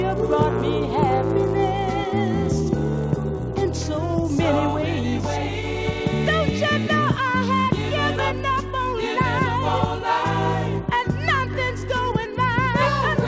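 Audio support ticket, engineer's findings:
Resampler restarted on every block. Steady 100 Hz buzz under the sound, whole clip, present only while signal plays. Probable component: 24 kHz to 16 kHz sample-rate converter, state reset per 10 ms block. Each block edge is converted without true neighbouring samples, leaving a small error every 10 ms.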